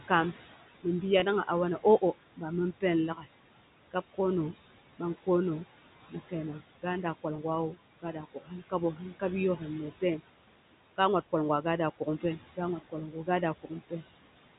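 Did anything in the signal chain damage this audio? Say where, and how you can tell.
Yes. At the call-processing stage there are noise suppressor artifacts throughout. The background sinks about 16 dB between phrases and rises under speech.

At the network stage there is packet loss with pitch repetition at 1.2 s and 7.36 s. Each 20 ms gap is filled by a repeated pitch period. It sounds like a brief buzzy hold.

The noise suppressor also cuts speech at 3.15–3.26 s, 6.11–9.22 s, 9.57–10.2 s, 11.99–13.28 s and 13.63–14.03 s. It mistakes quiet speech for noise. Parts drop by up to about 17 dB and sound swallowed.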